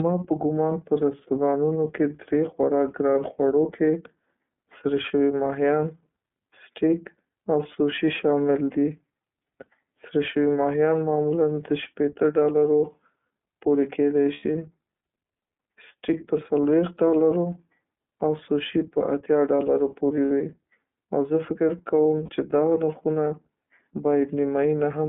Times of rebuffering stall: none

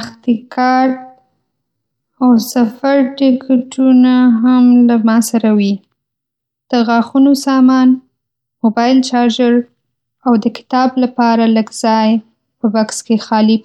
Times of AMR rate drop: none

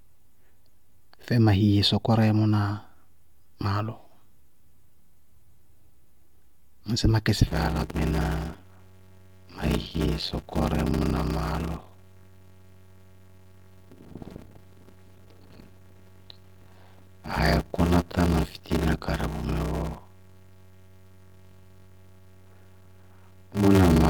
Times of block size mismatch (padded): 7.47-24.10

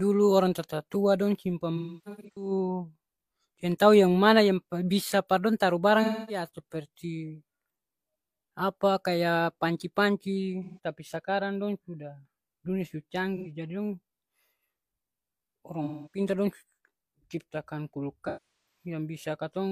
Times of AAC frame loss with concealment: 1.76-2.51, 6.02-6.49, 10.64-10.79, 13.36-13.50, 15.84-16.20, 18.27-18.86

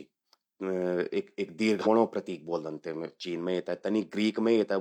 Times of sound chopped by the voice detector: none

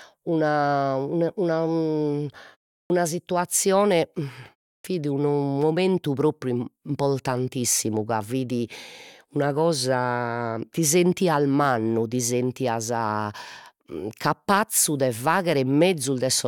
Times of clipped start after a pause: 2.84-2.90, 4.78-4.84

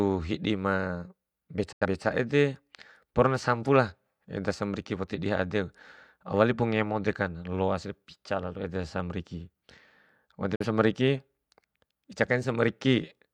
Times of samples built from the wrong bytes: none

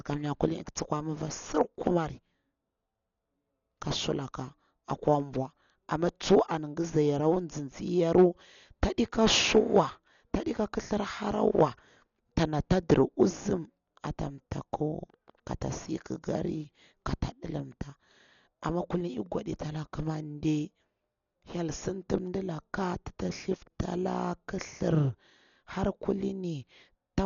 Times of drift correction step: none

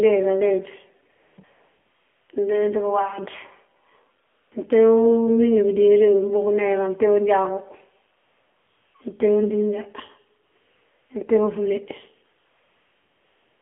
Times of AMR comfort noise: 1.12-2.30, 4.24-4.52, 8.18-8.94, 10.46-11.10, 12.40-13.61

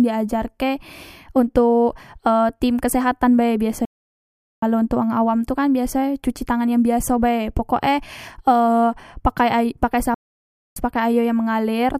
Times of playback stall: 3.85-4.63, 10.14-10.76

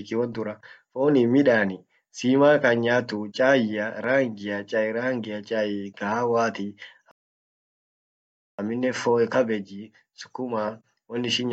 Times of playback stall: 7.11-8.59

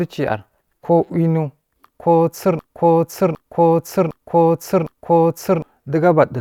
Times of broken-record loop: 2.59-5.62

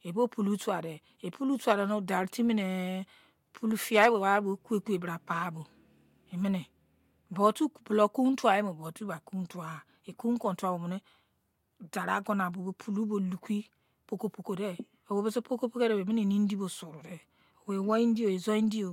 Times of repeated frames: none

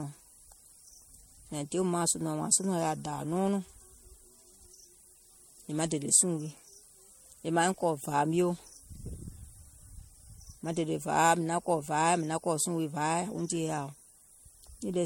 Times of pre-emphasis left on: none

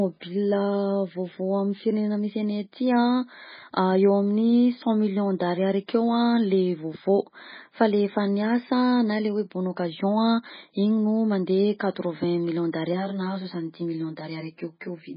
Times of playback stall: none

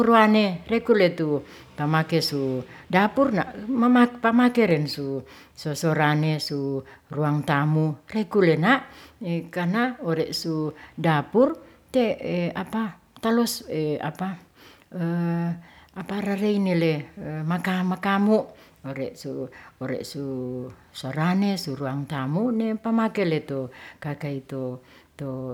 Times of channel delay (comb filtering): none

